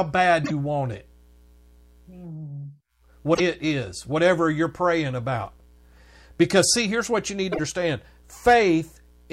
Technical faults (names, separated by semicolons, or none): broken MP3 bit reservoir